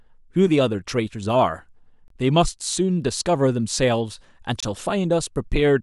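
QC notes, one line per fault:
2.08–2.10 s and 4.60–4.63 s, gap between chunks: the audio stops dead for about 23 ms at each join. No material is missing. Playback resumes where it left off, so the holes recur at a steady 2.5 s spacing set by the chunk length.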